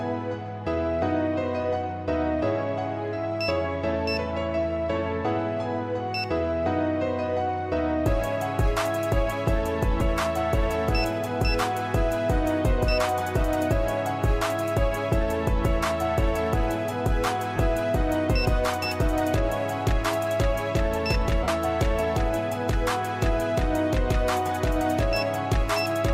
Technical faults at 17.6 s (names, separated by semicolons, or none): lost LE Audio frames